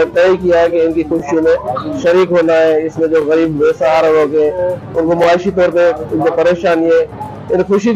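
At 1.20 to 1.22 s there is a short stutter or click. It comes back at 3.22 to 3.24 s, 5.24 to 5.26 s and 7.26 to 7.28 s. These are overlapping chunks. The audio was handled in 2.0 s chunks. Each chunk began 20 ms before the last one ended, so that 20 ms plays twice at every join.

At 2.02 s a brief chirp, squeak, blip or burst of noise breaks through. This is a corrupt frame decoded. Bits in the compressed data were flipped, and the decoder played a couple of damaged frames anyway. Misread values put energy at wrong frequencies for just that instant.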